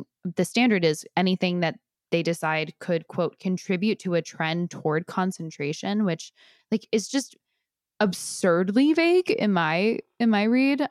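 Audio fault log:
Nothing stood out on listening to this speech recording.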